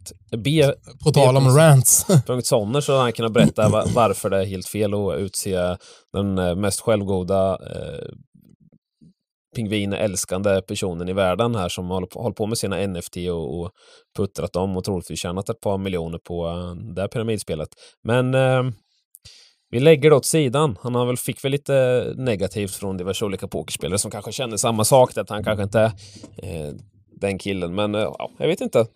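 No technical faults are audible.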